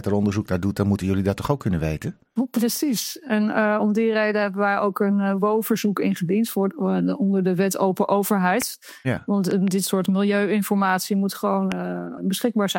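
A sharp loud pop cuts through at 8.62 s, about 10 dB above the surrounding sound. At 9.51 to 9.70 s there are two pops in quick succession at a similar level, and at 11.72 s a harder single pop stands out about 15 dB above the signal. The sound carries on uninterrupted beneath each one. The likely cause is a brief voltage spike from a plug, switch, static discharge or driver glitch added to the signal.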